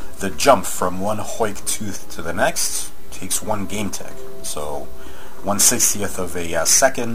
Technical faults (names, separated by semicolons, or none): none